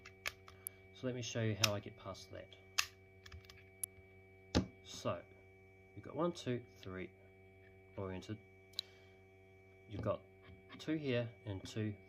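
Three sharp snaps sit on top of the sound at 0.67, 3.84 and 8.79 s, likely an electrical switching spike from a nearby switch or discharge. Each appears as a thin vertical spectrogram line and a lone waveform spike, near -20 dBFS for the first and third and about -25 dBFS for the second.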